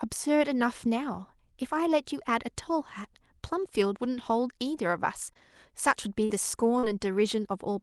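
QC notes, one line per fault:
5.33–5.37 s, 6.25–6.31 s, 6.79–6.85 s, short concealed packet loss: 20 to 40 ms of audio failed to arrive, and the decoder extended the preceding sound to bridge each gap. It is heard as a brief smear or wobble. On a spectrogram, harmonics are copied flatly across the hole, with smeared onsets and a blended edge.
5.35–5.37 s, 6.29–6.31 s, 6.83–6.85 s, 7.25–7.27 s, lost packet rebuilt from error correction: each 20 ms frame was replaced by the next packet's low-rate Opus copy, so nothing drops out but the frame turns rough and grainy. A spectrogram shows noisier texture.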